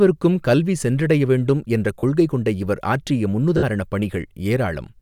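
At 1.99 s, right after "கல்வி சென்றடைய வேண்டும் என்ற", there is a 40 ms gap from lost LE Audio frames, which fits four 10 ms frames. The LC3 decoder covers it by repeating the last spectrum with randomised signs, so the tone of the speech turns into a brief noisy smear before "கொள்கை கொண்ட இவர் ஆற்றிய". A second, 60 ms loss at 3.57 s, after those words, smears longer.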